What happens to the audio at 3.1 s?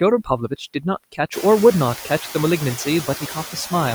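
At 3.1 s the speech is cut by the noise suppressor. Between 3.05 and 3.72 s the suppressor mistakes parts of the speech for background and turns them down with it, by up to about 13 dB. Around 150 ms in total sounds swallowed or faint.

Noise suppressor artifacts are also present here, as they are throughout the clip. The suppressor lowers the bands it classes as steady noise by about 7 dB, frame by frame. The residual background therefore dips and swells with the speech.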